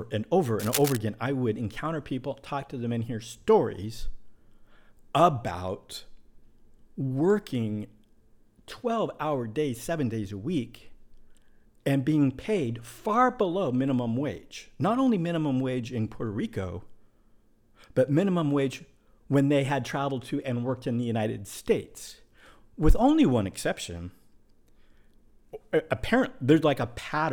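Right near the start of the speech, from 0.59 to 0.98 s, there's a burst of cable scratch noise: a dense, ragged crackle sitting over the sound, nearly as loud as the speech itself. It is brief, so you get under half a second of rough rustling. The likely cause is a worn cable or connector being moved, its contact resistance jumping around fast enough to spray uneven noise into the signal.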